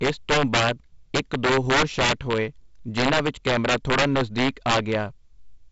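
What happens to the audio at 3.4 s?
Integer overflow runs through the whole clip, so it is present at 3.4 s too. With the signal driven about 9 dB past full scale, the loudest few percent of samples wrap to the opposite sign instead of limiting, producing harsh cracks far sharper than clipping on every loud peak. Beneath them, the G.722 wideband coding at 48 kbit/s keeps its band ending near 7.7 kHz.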